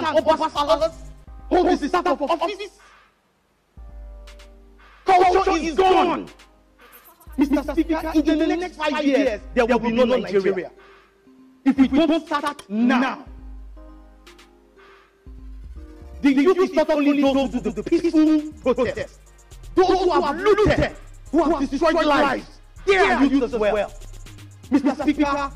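Throughout the audio a doubled audio track is heard: a second full-band copy trails the first by about 100 ms at roughly equal loudness, likely from the signal being captured twice through a slower path. Unlike echo or reverb, the repeat never decays and carries no room colour.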